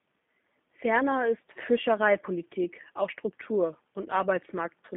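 Throughout, G.729 codec damage: speech cut to a 150 Hz–3.5 kHz line band with a rough, synthetic buzz from pulse-rebuilt excitation, unlike clean narrowband filtering, fitting 8 kbit/s G.729A.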